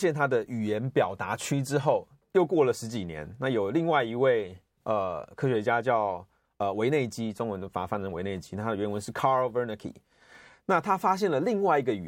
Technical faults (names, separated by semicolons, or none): none